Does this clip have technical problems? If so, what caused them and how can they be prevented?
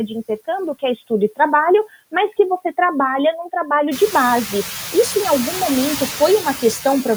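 Yes. Noise suppressor artifacts run through the whole clip. The suppressor pulls steady noise down by about 14 dB between phrases and lets it back up under the speech. This gets worse once the room noise jumps by about 17 dB around 4 s, to only about 11 dB below the speech. Lowering room noise at the source or easing the suppression strength would prevent it.

The first 4.73 s sound dull and boxy. The audio then opens up with no gap or level jump. That is likely an input switched to a poorer device, such as a headset's call profile, before the proper microphone took over. Locking the input to one device before recording would prevent it.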